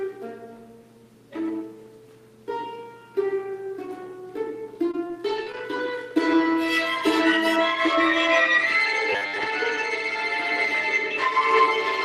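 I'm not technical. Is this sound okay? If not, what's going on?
No, there are a few problems. From 4.91 to 5.60 s there's repeated packet loss: four small chunks went missing and got patched over, so the sound turns choppy.

At 6.10 s one lost packet was rebuilt from error correction, a backup copy, so there's no gap, just a brief rough, fuzzy moment.

From 7.56 s to the end, de-emphasis was applied wrongly: the treble got cut when it shouldn't have been, so everything sounds dull and muffled.

From 9.12 to 9.48 s there's a robotic sound from repeated short buffers, likely because tiny bits of audio were replayed to fill delays. It leaves a stiff, metallic buzz around 100 Hz, with about half that stretch repeated.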